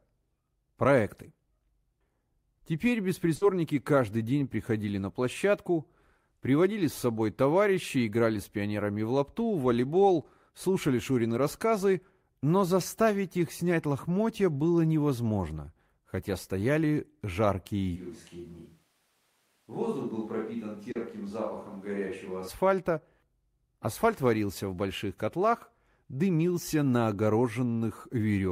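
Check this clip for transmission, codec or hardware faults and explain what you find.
There are three faults in this speech clip: a burst of packet loss early on, a stretch that sounds like a distant microphone, and a short concealed packet loss inside that stretch.

From 3.35 to 3.43 s there's a burst of packet loss. A run of packets didn't arrive in time, so the receiver held on to the last sound for about 60 ms, letting it fade. It then skipped ahead and dropped roughly another 60 ms of real audio before picking up again at "каждый день приходили на". You hear a smeared hold followed by a small jump.

Between 17.98 and 22.47 s the sound suddenly turns hollow and roomy. The bass thins out, the level falls by about 5 dB, and the background noise rises to around 35 dB below the speech. The likely cause is a switch to a distant microphone, probably the camera's, after the close mic dropped out. 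Both the change to it and the change back happen abruptly.

At 20.91 s, inside that distant-mic stretch, there's a short concealed packet loss. About 40 ms never reached the decoder, so it extended the previous sound from its pitch or as shaped noise and then blended back into the real signal. It comes across as a quick wobble or smear.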